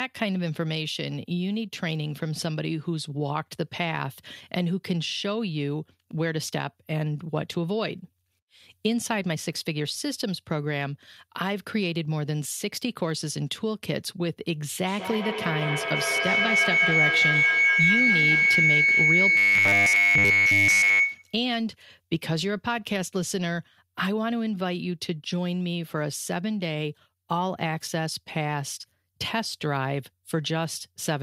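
From 14.87 to 21.43 s a feedback howl builds near 2 kHz, pulsing about every 0.2 s and peaking about 6 dB above speech: a bright horizontal band on the spectrogram. From 19.37 to 21.00 s, robotic sound from repeated short buffers adds a rigid 100 Hz buzz, likely from a 10 ms segment looping almost continuously, visible as evenly spaced harmonics and identical repeating waveform cycles.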